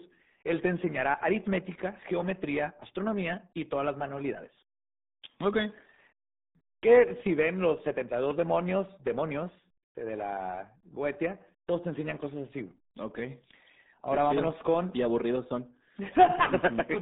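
Muffled, gargly speech runs from start to finish, with a boxed-in, telephone-like band: almost nothing below about 200 Hz, and the top stops dead near 3.8 kHz. That is the RealAudio 14.4 codec, the old dial-up speech coder, applied heavily throughout. It crushes the signal into a very low data rate, consistent with roughly 8 kbit/s, modelling the voice coarsely. The result is the warbling, bubbling texture and the missing sibilance and air.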